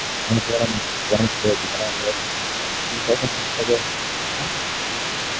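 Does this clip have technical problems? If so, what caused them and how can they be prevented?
Yes. The echo canceller most likely left residual loudspeaker signal in the microphone feed, so the other side's voice leaks through for the whole clip, 0 to 5.4 s, sitting roughly 10 dB below the speech as a second voice. A better-tuned canceller, or a headset instead of a loudspeaker, would prevent this.

Speech is suppressed in double talk. The canceller, likely confused by both sides talking at once, turned the talker down by about 5 dB at 0.2 to 0.73 s, 1.06 to 1.12 s, 1.58 to 3.89 s and 4.38 to 4.6 s, so the voice dips in pieces. A canceller with stronger double-talk detection would avoid this.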